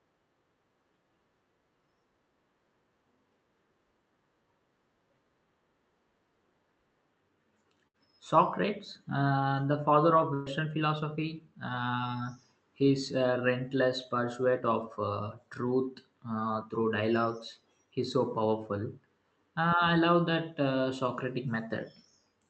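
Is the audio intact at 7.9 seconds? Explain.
No. From 7.87 to 7.97 s the speech stalls into a stretched, fading copy of the preceding sound, then jumps ahead. This is a burst of packet loss: about 65 ms was concealed by extending the last audio, and 60 ms is missing.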